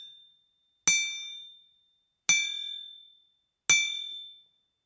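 Everyday sounds here, run through call-style microphone processing with nothing above 8 kHz, and gain pumping all the way through: the gain swings by something like 15 dB, pulled down under each loud hit, likely from input gain set far too high with a fast limiter clamping down.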